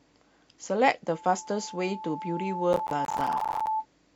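From 2.73 to 3.67 s the speech breaks into processor overload crackle. The machine is falling behind on short buffers, around ten milliseconds each, and a few dozen miss their deadline. Each miss drops out to silence with hard edges, so the voice sounds gritty and torn until the load clears.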